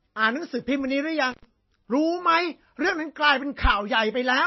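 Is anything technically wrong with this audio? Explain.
Yes, two faults affect this speech.

Throughout, the audio sounds watery and swirly, likely from MP3 compression at a low bitrate around 24 kbps; a spectrogram shows nothing above 5.8 kHz and flickering high-frequency patches.

From 1.31 to 1.45 s, an intermittent contact opens for about 89 ms. The sound drops out with crackle at both edges, visible as a near-flat gap in the waveform bracketed by spikes.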